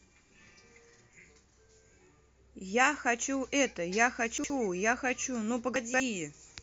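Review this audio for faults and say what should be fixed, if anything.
A jumbled stutter at 4.38–4.5 s and again at 5.76–6.0 s: chunks out of order, a 60 ms chunk playing one, then three, chunks late. Reorder chunks by sequence number in the jitter buffer before playback.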